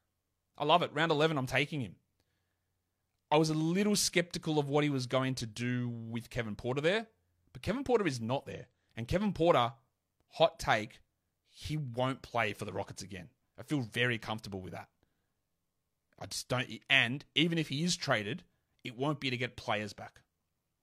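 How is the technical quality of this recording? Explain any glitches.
One glitch stands out, just after "is not": damaged data in the compressed stream from 8.50 to 8.55 s. Corrupted bytes make the decoder misread those frames and lose sync until the next frame header. The result is a brief glitch in the speech.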